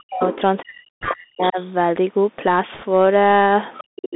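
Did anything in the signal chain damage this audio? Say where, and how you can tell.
Yes, several stages did. Throughout, this is speech carried by a Bluetooth CVSD headset codec at 64 kbps: the band sits at roughly 200 Hz to 3.7 kHz, sibilants turn scratchy, and a granular hiss sits underneath. That comes from one-bit delta coding with an adaptive step that can't keep up with fast, bright sounds.

In call processing, you get speech suppressed in double talk from 0.03 to 0.21 s, 0.63 to 1.58 s and 3.81 to 4.16 s. The speech dips by something like 40 dB in places. That's likely the echo canceller seeing both ends active and ducking everything rather than risk passing echo.

The other side's voice is leaking through at 0.32 to 0.41 s and 1.42 to 1.66 s, about 15 dB under the talker, and again at 3.78 to 3.83 s at about 20 dB down. That's likely loudspeaker echo the canceller didn't fully subtract from the mic.

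On the wireless link, there are bit errors on the Bluetooth voice link at 1.01 to 1.09 s and 2.75 to 2.83 s. You hear a rushing crackle, not sharp clicks, at an error rate of a couple of percent. Each CVSD bit carries little weight, so flipped bits smear into noise and fade quickly.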